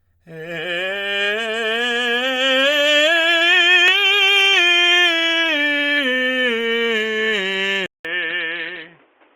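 A short music clip that goes dull at 7.86 s: after a 188 ms gap, everything above 3.6 kHz is gone through to the end, with a new faint background noise roughly 40 dB down and no real level jump. Likely the input switched to a poorer device.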